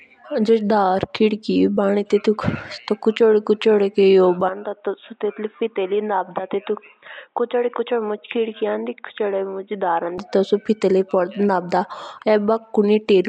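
Speech where, from 4.49 to 10.18 s, the sound goes dull, a bit quieter and cut off above 3.8 kHz, likely the input switched to a poorer device.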